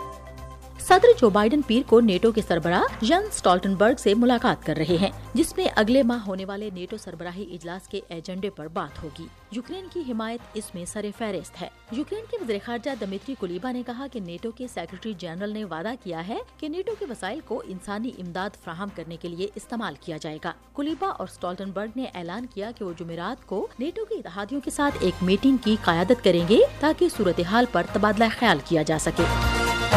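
No technical faults can be heard in this clip, and the smooth level changes come through as gradual rises and falls in level.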